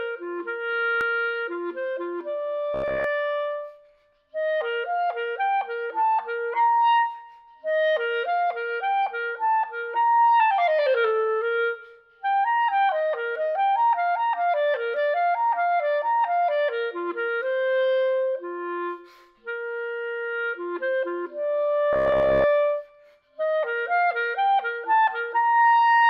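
From 2.74 to 3.04 s, and again from 21.93 to 22.45 s, the sound turns into robotic sound from repeated short buffers: a rigid, metallic buzz fixed at 66.8 Hz that follows the contour of the audio only loosely. The likely cause is input arriving too seldom, so playback loops the last block, about 15 ms long to match that pitch, for most of each stretch while the real audio in between is skipped.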